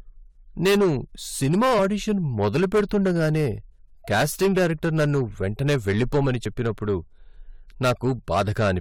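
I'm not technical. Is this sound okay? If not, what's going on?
No. The speech has hard clipping throughout. The recording was too loud, so the loudest moments get their tops sliced flat, causing harsh crackle. At 6.44 s, just after "డైరెక్టర్ నన్ను వెంటనే వెళ్లిపొమ్మని", there is damaged data in a compressed stream. Part of the file got garbled, so the player briefly stumbles and makes a quick glitch.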